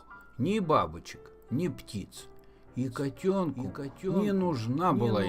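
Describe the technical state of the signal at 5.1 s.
At 5.1 s the sound carries a doubled audio track. The doubling begins abruptly at 2.83 s and runs to the end of the clip. A second full-band copy trails the original by roughly 0.7 s, a few decibels quieter. It has no decay or room colour, so it sounds like a detached repeat rather than an echo. The likely cause is the signal being picked up a second time through a slower path.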